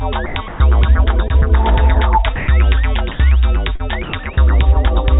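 The voice detector on the sending side likely misjudged parts of the signal as background and stopped transmitting. The receiver then inserted comfort noise, so the sound gives way to a flat, steady hiss and returns once the detector triggers again. This sound dropped by the voice detector occurs from 0.26 to 0.36 s and from 0.48 to 0.60 s.

At 1.28 to 1.32 s, a short concealed packet loss appears. About 20 ms of audio failed to reach the decoder in time, and the receiver bridged the gap by extending the preceding sound before blending back into the real signal. It comes across as a brief smear.

The detector cuts out again at 2.36 to 2.48 s and at 3.12 to 3.20 s, each time leaving only steady noise where the sound should continue.

A second, longer concealed packet loss spans 3.76 to 3.81 s. Here about 40 ms went missing, and the stretched fill produces a wobble before the audio resumes.

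The final dropouts fall at 4.03 to 4.13 s and 4.23 to 4.25 s. Across all of them, nothing is heard above 4 kHz, which fits the narrowband G.711 A-law codec on the call path.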